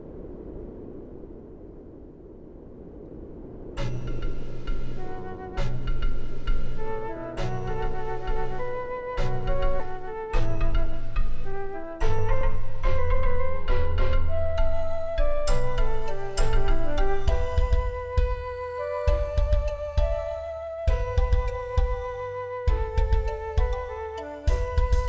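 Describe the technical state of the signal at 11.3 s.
At 11.3 s, a jitter buffer speed-up (9.90–13.22 s) removes short pitch-period chunks, about 0.3 s in all. The audio runs hurried at 109% speed with unchanged pitch. The spectrogram shows time-squeezed events with steady harmonic spacing.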